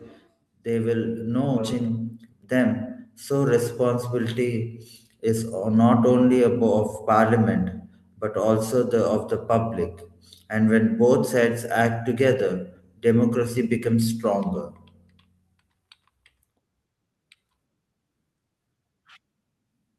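At 1.57 to 1.59 s there's a skip ahead: roughly a second of speech got dropped, so playback jumps forward with essentially no gap and the two sides butt together. Right after, from 1.73 to 3.15 s, a jitter buffer speed-up trims short pitch-period slices, around 150 ms in total, so the speech runs at 110% speed at unchanged pitch and sounds hurried.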